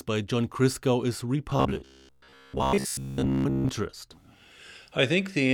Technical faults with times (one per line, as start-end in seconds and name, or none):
1.50-3.69 robotic sound from repeated short buffers